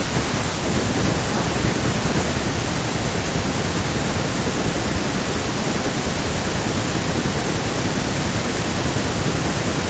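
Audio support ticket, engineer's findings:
Nothing stood out on listening; the speech came through the call path as expected, with the upper range ending around 8 kHz as the call processing and codec bandwidth would give.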